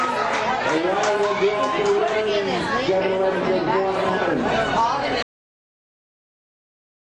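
The audio stops abruptly at 5.23 s, chopped off in the middle of a sound rather than fading or decaying naturally, and what follows until the end of the roughly 7 s clip is flat digital silence. This is a cut-off end: the final stretch of buffered audio was never written out or played back, so the signal simply halts mid-sound instead of reaching a natural ending, with nothing but silence filling the remaining couple of seconds.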